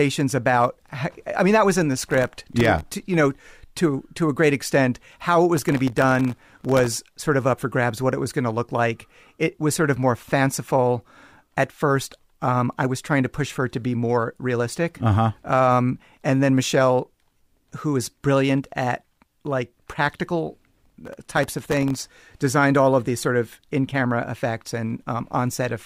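Speech carrying three bursts of gritty, tearing crackle: 2.02 to 2.81 s after "that was in the", 5.57 to 6.97 s ending before "sort of up for", and 20.82 to 22.00 s after "brilliant at like practical". This is processor overload crackle. The processor kept missing deadlines for very short buffers, which fits buffers of under a millisecond. Each miss dropped in a hard-edged sliver of silence, and dozens in a row merged into crackle.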